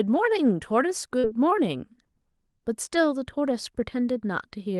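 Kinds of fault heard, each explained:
Short concealed packet loss: about 40 ms of speech never reached the decoder in time, so the receiver extended the preceding sound to fill the gap, leaving a brief synthetic patch from 1.19 to 1.26 s.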